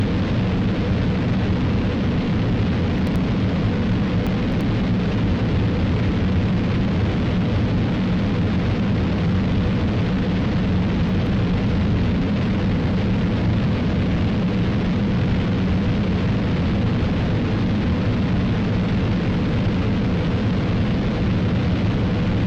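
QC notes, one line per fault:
2.99–3.16 s, chunks out of order: one block of about 85 ms was delivered a chunk late and plays after its successor, giving a jumbled blip.
4.27–4.61 s, chunks out of order: a block arrived three chunks late, so about 0.34 s of sound is reshuffled, heard as a longer garbled stretch.
11.09–11.26 s, chunks out of order: again one 85 ms block landed a chunk late, and the swap produces a brief scrambled moment.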